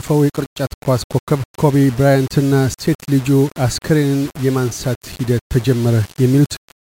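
From start to finish, grainy distortion tracks the sound, likely low bit depth without dither: roughly five-bit rounding leaves error about 20 dB below signal, gritty on quiet passages.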